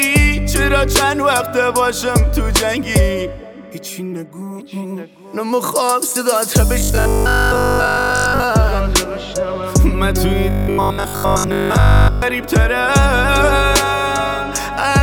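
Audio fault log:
6.80–8.44 s and 10.50–12.22 s, robotic sound from repeated short buffers: the sound becomes a rigid, metallic buzz at 50 Hz that only loosely tracks the original. The likely cause is audio arriving too late, so a short chunk of about 20 ms is replayed in place of most of the real signal.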